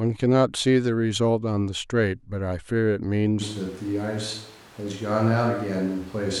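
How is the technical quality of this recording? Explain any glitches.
The recording has one clear fault, running from 3.42 s to the end.

Switch to a distant microphone, 3.42 s to the end: the close microphone's feed likely dropped out, leaving a farther one that hears more of the room. The speech abruptly turns hollow, roomy and thin in the bass, at roughly the same level, with room noise rising to around 25 dB below it.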